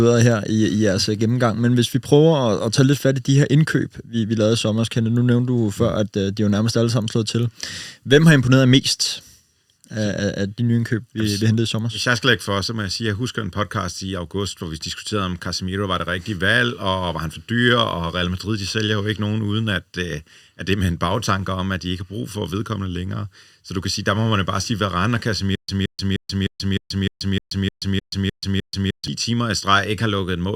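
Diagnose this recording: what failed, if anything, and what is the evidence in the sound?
A stutter with silent gaps runs from 25.55 s to 29.08 s, most likely a stall at the playback or streaming buffer. In that span a single burst of speech about 172 ms long repeats 11 times, each followed by 132.5 ms of digital silence, giving a steady 305 ms cycle. At each retry the player re-issued its last buffered fragment and then ran dry. The speech that should have filled those 3.5 seconds is missing.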